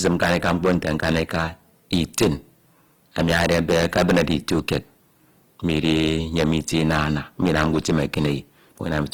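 A harsh, buzzing fuzz sits on every loud syllable of this speech recording from start to finish. That is hard clipping: the signal was driven about 17 dB past what a stage could pass, so the peaks are sliced flat, with around one sample in twenty cut off and the flat tops adding bright harmonics high in the spectrum. Under that, the tone is grainy and rough rather than swirly, and the sound still reaches to about 20 kHz. This points to Opus compression in its music (CELT) mode as the likely cause, filling starved bands with folded or noisy energy, which fits a low rate around 16 kbps.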